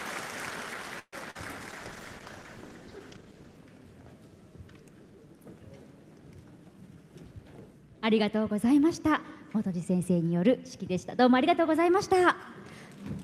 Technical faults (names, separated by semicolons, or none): call audio freeze; short concealed packet loss; call bitrate drop; jitter buffer speed-up